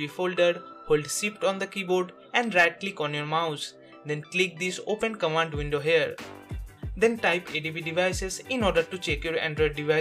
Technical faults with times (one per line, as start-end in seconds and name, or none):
none